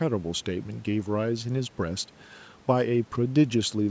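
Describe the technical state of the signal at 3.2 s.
At 3.2 s the audio is intact, with only the usual call microphone processing, which holds nothing above 8 kHz, and faint room noise about 31 dB below the speech.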